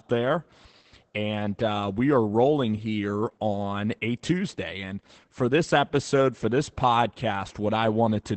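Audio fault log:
throughout: Opus voice compression. The speech has been squeezed through Opus's SILK linear-prediction coder at a low rate, which fits about 12 kb/s in 20 ms frames, with the band held to wideband so nothing above about 8 kHz survives. The excitation is coded coarsely, so the damage is plainly audible: the voice sounds muffled and dull at the top, with a hoarse, slightly robotic edge where the coder approximates the vocal buzz.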